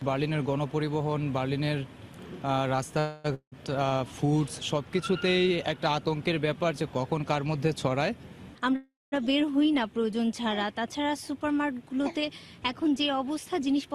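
Two call audio freezes, a long network dropout and two stretches of jitter buffer speed-up disturb the audio. At 2.99 s the sound stalls into a fading buzz for about a quarter of a second, then picks up at 3.26 s exactly where it stopped, so nothing is lost and the delay grows by 249 ms. That is likely packets held up until the jitter buffer ran dry. A second freeze at 8.76 to 9.14 s runs longer, about 360 ms, and its fill decays into roughly 220 ms of silence before the audio resumes intact. Between them, at 3.34 to 3.54 s, a long network dropout sounds similar at first: a brief fading tail, then about 90 ms of silence. But when the sound returns it has jumped ahead, with about 180 ms never played. That skip, rather than a clean resumption, separates it from a freeze, and it is likely caused by audio that never arrived. The jitter buffer speed-up comes just before the second freeze, at 8.53 to 8.74 s, where the sound rushes at 157% speed as roughly a tenth of a second is trimmed out in small pitch-period pieces. 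It recurs more gently at 13.30 to 13.90 s, at 111% with around 70 ms removed. In both, the pitch stays put while the timing hurries, which distinguishes this buffer trimming from a simple playback-rate change that would also raise the pitch.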